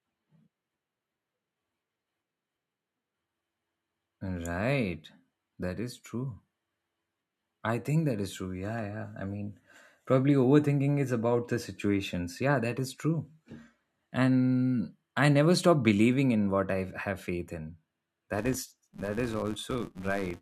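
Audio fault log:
18.34–20.41 s, filter restarted on every block: right after "I have faith in", a steady 200 Hz buzz rides on the speech, rising and falling with its level. The filter clears its memory every 5 ms block, so each block starts with a small click.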